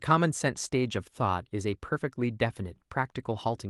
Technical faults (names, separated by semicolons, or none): none